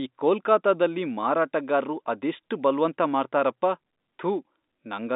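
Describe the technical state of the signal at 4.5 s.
At 4.5 s the speech is intact, carried through the narrow telephone band of the G.711 line with no fault at that moment.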